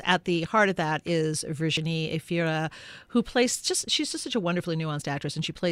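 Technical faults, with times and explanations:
1.77 s and 3.75 s, audio missing between chunks: the recording was likely being handled in blocks of about two seconds, and at each handover between blocks a sliver of sound, around 20 ms, was dropped and the two edges butted together without any gap. The result is a tiny jump in the speech right after "heart of that is" and again between "who plays" and "she's just such a", spaced roughly two seconds apart.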